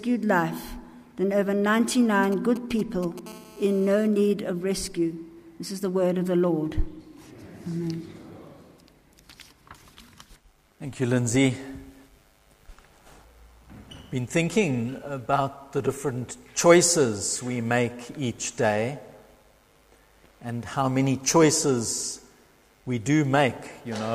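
From 2.23 to 3.19 s a galloping dit-dit-dit of brief 217 Hz buzzes cuts in, sitting roughly 15 dB under the sound. These are GSM signalling bursts: a nearby 2G phone sending short groups of radio pulses, which the audio circuitry rectifies into audible clicks.

At 3.26 s the pattern turns into a continuous, hard, raspy buzz at 217 Hz, thick with harmonics and about 22 dB below the signal, lasting until 4.07 s. This is GSM phone buzz, the phone now transmitting steadily as in a call, each burst rectified into sound.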